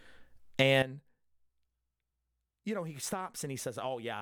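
A gain change was likely applied in a single step with no ramp, producing a sudden gain jump at 0.82 s. From there to the end, the speech and its background noise drop together by about 13 dB, an abrupt fall in level that never recovers.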